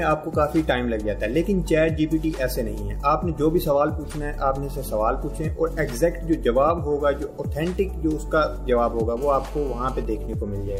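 From 9.17 to 10.03 s the audio carries GSM phone buzz: a hard, raspy 217 Hz tone about 22 dB below the signal, from a nearby 2G phone in a call whose transmit bursts the audio circuit rectifies. A spectrogram shows a steady comb of 217 Hz harmonics climbing high. From 10.05 to 10.75 s, GSM signalling bursts follow, much fainter at around 30 dB down. With the caller silent, the phone sends only sparse burst groups, heard as even ticks with a longer buzz twice a second. They show as short, evenly grouped vertical stripes in the waveform.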